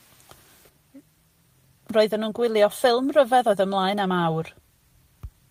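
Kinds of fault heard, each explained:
No technical fault can be heard anywhere in this speech recording. There is nothing to list.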